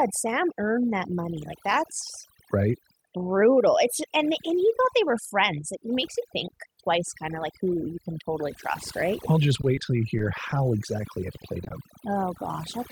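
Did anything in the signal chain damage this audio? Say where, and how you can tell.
Yes. Overdone noise removal in call processing runs throughout: the background sits near silence with twinkling specks. A spectrogram shows gated-out bands and isolated flecks.

At 1.19 to 1.21 s, just after "earned that", a sharp snap sits on top of the audio as a vertical full-band line and a needle-like waveform spike, likely an electrical switching spike in the analogue wiring.

At 9.61 to 9.65 s, a short stall from a late packet holds the sound about 20 ms too long, seen as repeated, smeared waveform cycles. The jitter buffer ran empty while the network delay grew by about 20 ms.

Short concealed packet loss occurs at 9.75 to 9.79 s, just before "till you", and at 11.64 to 11.68 s and 11.68 to 11.72 s, after "exactly it played". Each replaces about 20 ms of lost audio with a smeared, blurred spectral patch.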